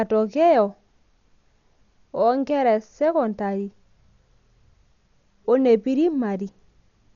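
Dolby Digital compression, throughout: speech stops at 7 kHz, dull and roughly fluttering, likely from a low-bitrate stream around 48 kbps filling starved frequency lines with noise.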